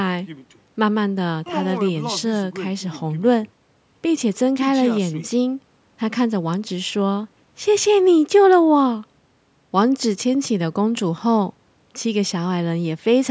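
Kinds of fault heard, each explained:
No faults heard; the speech carries the normal signature of call microphone processing, with the lowest bass filtered out and nothing above 8 kHz.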